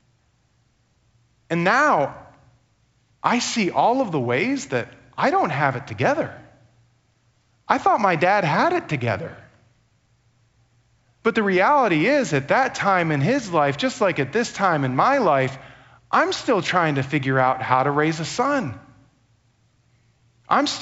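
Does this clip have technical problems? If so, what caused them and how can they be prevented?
Yes. At 17.70 s a brief rough pop comes from bit errors on an ADPCM link. Flipped bits knock the decoder's step size and predictor off track, so the disturbance rings on with a momentary level jump rather than leaving a silent gap as packet loss would. Error detection on the link, with bad frames muted or concealed, would prevent it.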